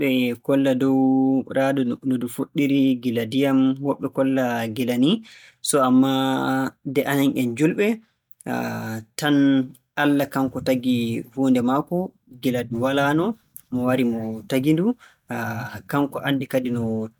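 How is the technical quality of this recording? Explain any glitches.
The technical quality of this recording is good, and there are no glitches to explain.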